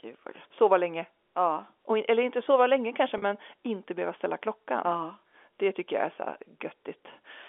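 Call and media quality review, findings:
Packet loss with pitch repetition, 3.18 to 3.22 s. About 40 ms of speech missing, which fits two lost 20 ms packets. The receiver's concealment repeats the last pitch period across the gap. The result is a brief held, buzzy tone in place of the missing speech. The G.711 telephone coding path shows its expected 300 to 3400 Hz line band.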